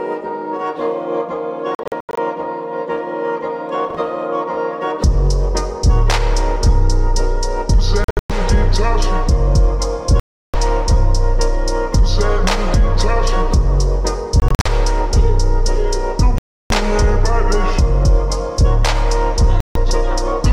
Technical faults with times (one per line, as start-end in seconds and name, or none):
1.75-2.19 Bluetooth dropout
8.04-8.31 Bluetooth dropout
10.20-10.55 Bluetooth dropout
14.40-14.67 Bluetooth dropout
16.38-16.71 Bluetooth dropout
19.60-19.77 Bluetooth dropout